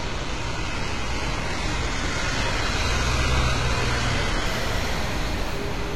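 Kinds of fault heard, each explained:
Adaptive stream starting at a low bitrate: the player began on a lean, low-bitrate version of the stream so playback could start immediately, then moved up once it had measured the connection. For the first 4.46 s the sound is dulled, with nothing above 11.8 kHz and stronger coding artefacts, which fits roughly 16 kbit/s HE-AAC. The treble and detail then return suddenly and without any gap, consistent with a step up to about 96 kbit/s AAC-LC.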